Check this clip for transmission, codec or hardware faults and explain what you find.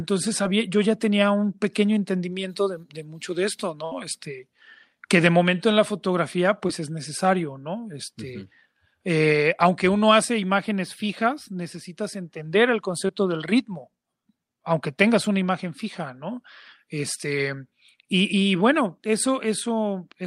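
There are two kinds of transmission fault, both from lost packets. A burst of packet loss occurs from 3.85 to 3.93 s. About 60 ms of speech never arrived. The receiver covered it with 64 ms of the last sound held and faded before skipping ahead. Unlike the short glitches, it is a distinct held buzz or fading hiss.

Short concealed packet loss occurs at 6.67–6.71, 13.07–13.11 and 17.15–17.18 s. Each drops 20 ms, patched with 17, 18 and 10 ms of continued sound and then blended back. Each is a brief smear rather than an audible held tail.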